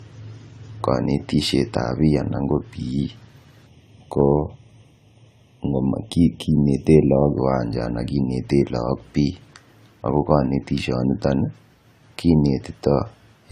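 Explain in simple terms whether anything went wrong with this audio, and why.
Two things went wrong. The whole clip sounds swirly, smeared and hollow. This is generation loss, likely from re-saving it in a compressed format about ten times.

From 3.67 to 7.38 s, the speech turns thin and phasey. This is channel delay (comb filtering): one side lags by about a third of a millisecond, cancelling tones at evenly spaced pitches starting near 1.5 kHz.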